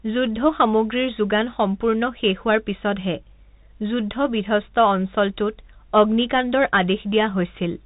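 From start to finish the speech has been through a Bluetooth CVSD headset codec, and the damage is plainly audible. Nothing gets through above 3.8 kHz, so everything sounds boxed-in and phone-like. CVSD sends just one up-or-down bit per sample, consistent with a 64 kbit/s stream, so fast, loud high content outruns the adapting step. You hear that as gritty distortion, scratchy s sounds, and a grainy hiss sitting under the speech.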